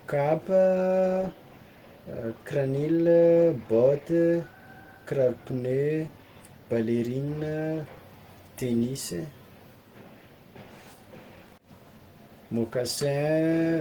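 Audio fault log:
Throughout: Opus compression. The speech sounds hoarse and somewhat muffled, with rough, grainy consonants and a fine noisy haze where upper bands are filled in with noise instead of being carried exactly. The damage is plainly audible. The likely cause is low-rate Opus, and the character points to its hybrid speech mode at around 16 kbps. On a spectrogram, energy still reaches about 20.1 kHz, but the upper region is smeared and noise-like rather than finely detailed.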